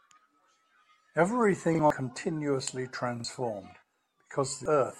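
Speech, with two kinds of fault. A repeated buffer occurs at 1.75 to 1.79 s and again at 3.20 to 3.24 s. Audio arrived late, so the device played its last block a second time. Each repeat is a 42.67 ms stutter with a hard join, which fits a 2048-sample buffer. About 40 ms of new audio is lost each time. Damaged data in a compressed stream causes brief blips at 1.90 s and 4.66 s. Corrupted frames there throw the decoder out of sync. It then skips ahead to the next good frame header.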